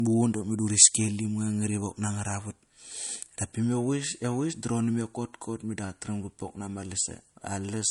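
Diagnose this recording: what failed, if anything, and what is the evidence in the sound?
The fault sits at the codec stage and runs through the whole speech clip. Nothing is present above 11.2 kHz, so the top octave is simply missing and the sound is dull. The swirly, smeared texture of a heavy MP3 encode is baked in. The likely cause is low-bitrate audio saved at a high bitrate: a low-rate MP3, around 48 kbit/s, re-encoded at a much higher rate. The second pass adds size but cannot restore what the first removed.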